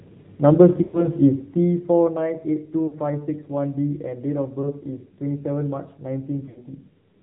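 Throughout, the speech carries the AMR narrowband mobile codec at a low rate that fits 7.4 kbps. Everything above 4 kHz is gone, and the voice sounds plainly buzzy and synthetic, unlike a simple low-pass filter, which would only sound muffled.

Lost AMR speech frames occur at 0.84 to 1.07 s, 2.88 to 2.95 s, 4.62 to 4.71 s and 6.46 to 6.65 s. The decoder stretches the last good sound and fades it rather than leaving hard gaps, which sets these apart from dropouts. The longest losses, about 100 ms at the first and last times, are drawn out and fade, and the voice returns rough. The 20 ms loss is only a brief warble.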